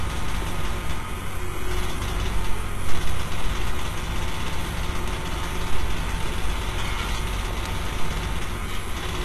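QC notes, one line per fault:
Throughout: HE-AAC compression. Nothing is present above 12.3 kHz. The treble sounds gritty and metallic, and its harmonics don't line up with the lower band. This is likely copied-up band replication at a low bitrate, which fits around 16 kbps.
0.12 to 9.24 s: word clock ticks. There are about fifty sharp ticks of uneven strength, one roughly every 0.2 s. Each tick marks a single sample dropped or repeated where an unlocked receiving clock drifts past the sender's, by roughly 100 ppm.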